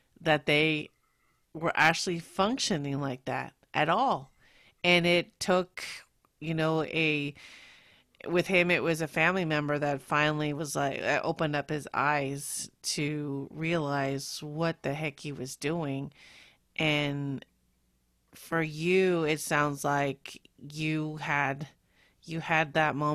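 From 1.79 to 1.89 s, just before "functioning like that at", and at 22.55 to 22.58 s, hard clipping occurs. Overdriven by about 6 dB, then about 1 dB, the peaks are cut flat. Crackle results.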